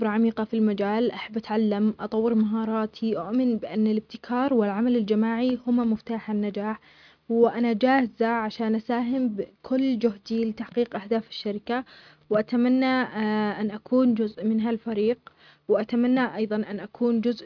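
No technical faults can be heard anywhere in this speech recording. There is no moment where the signal breaks, shifts or changes in a way that points to a problem.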